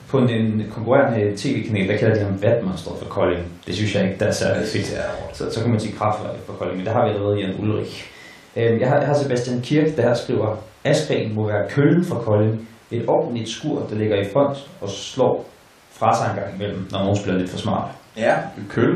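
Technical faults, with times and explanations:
No technical faults detected in the speech recording.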